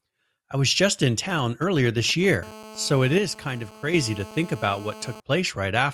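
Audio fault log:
1.30–2.35 s: GSM signalling bursts. A nearby 2G phone is signalling, and the audio circuit rectifies its short radio bursts into a galloping dit-dit-dit of brief buzzes repeating at 217 Hz. They sit roughly 20 dB below the speech.
2.43–5.20 s: GSM phone buzz. The phone has moved into a call and is now transmitting continuously in 217 Hz bursts. The rectified pulses produce a steady, hard, raspy buzz rich in harmonics, about 19 dB below the speech and unrelated to it.
3.18–3.94 s: one channel drops out. Partway through the buzz the overall level falls abruptly by 6 dB and recovers at 3.94 s. This is likely one stereo channel going missing, which halves the shared content once both channels are summed to mono.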